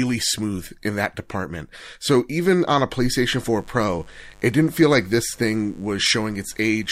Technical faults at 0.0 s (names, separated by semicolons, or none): none